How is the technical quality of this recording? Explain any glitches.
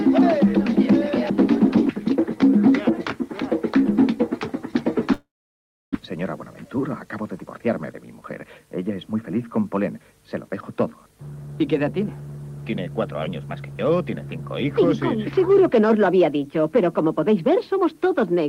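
The recording has two glitches, both on the transmission path.

From 5.13 to 5.97 s there is a long network dropout. The sound smears into a fading buzz or hiss, then goes quiet for about 660 ms. It resumes with roughly 600 ms of material gone, likely because packets stopped arriving and the receiver's concealment ran out.

From 6.16 to 8.84 s a jitter buffer speed-up follows. Playback runs at 106% with unchanged pitch and sounds slightly hurried. The receiver trims tiny pitch-period slices repeatedly to shed the backlog of about a fifth of a second left after the gap.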